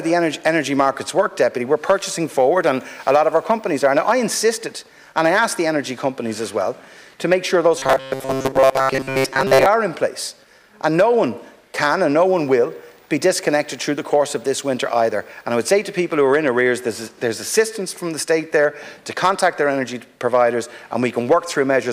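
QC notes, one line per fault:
7.78–9.66 s, robotic sound from repeated short buffers: the sound turns stiff and metallic with a steady 133 Hz buzz, likely from audio arriving too slowly so a chunk of about 7.5 ms kept looping and covered most of the real signal in that stretch.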